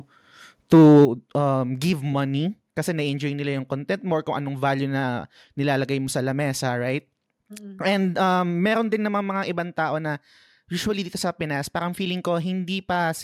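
Speech, marked by two linked faults near the start. The input level was likely set too high for the converter, producing microphone overload from 0.73 to 1.05 s. Peaks push roughly 4 dB past the converter's limit, so their tops are sliced flat, and around a tenth of the samples in that stretch were cut off at that limit. The result is a harsh, crackling edge on the loudest syllables, with a gritty buzz riding on the voice rather than a clean peak. At 1.05 s, right after that distorted burst, the microphone volume is stepped down, most likely because the call software detected the clipping and cut the device's input gain in one move. Voice and background together fall by about 10 dB at once. It is heard as a sudden drop in loudness with no fade, as if someone turned a knob abruptly.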